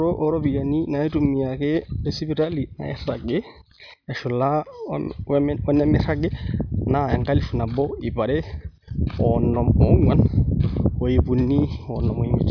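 No technical faults are audible.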